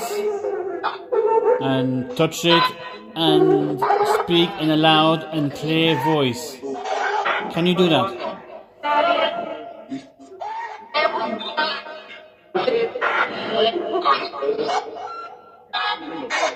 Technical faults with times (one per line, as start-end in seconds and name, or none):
none